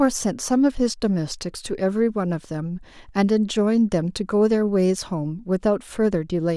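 Speech recording with no audible technical faults.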